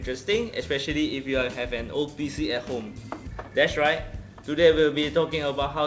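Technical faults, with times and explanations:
No technical faults can be heard.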